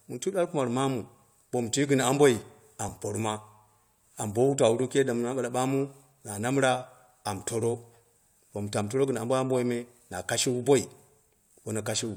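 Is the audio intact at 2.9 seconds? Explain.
No. At about 2.89 s two consecutive stream segments overlap: their time stamps claim the same stretch of time, so the player discards the overlapping portion as if it were duplicated, though that sound occurred only once. A few milliseconds of real speech are removed and the waveform on either side is spliced together with a sudden jump, heard as a brief click or tiny skip. The stream is carried in 4-second segments.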